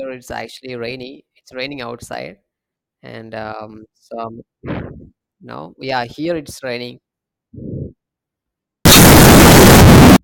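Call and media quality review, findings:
8.85–10.16 s: float read as integer. Sudden very loud, harsh speech with background noise as loud as the voice, pitch still traceable. Waveform goes near-square at an almost fixed, high level; spectrogram floods broadband. Likely 32-bit float samples decoded as 32-bit integers.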